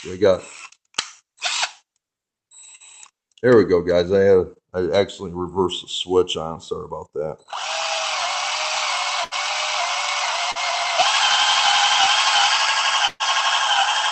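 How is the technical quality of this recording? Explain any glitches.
The recording has four brief dropouts typical of a network call. All the audio is limited to about 8 kHz, consistent with Opus running near 32 kbps.

At 2.75–2.83 s, 9.24–9.34 s and 13.07–13.23 s, there are bursts of packet loss. The sound stretches into a held buzz or fading hiss for about 45, 74 and 124 ms, then jumps ahead. Late or lost packets forced the receiver to extend the last sound, skipping about 40, 80 and 120 ms.

At 10.51–10.58 s, there is a short concealed packet loss: a quick smear or wobble lasting about 40 ms. That much audio failed to arrive in time, so the receiver continued the preceding sound and blended it back into the real signal.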